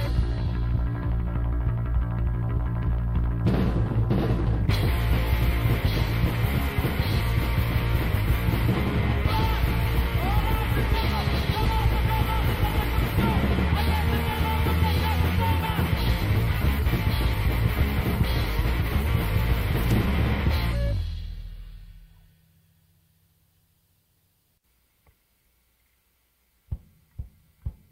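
A brief burst of loose connector crackle at 19.84 to 19.91 s, where a worn or dirty contact intermittently breaks the signal path, chopping the audio into scratchy crackle.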